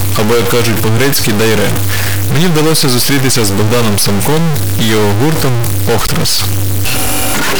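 Speech, buzzing harshly throughout with noise-filled pauses, likely from a stuck bit worth about -10 dBFS; the waveform shows stepped offsets, the spectrogram broadband haze in gaps.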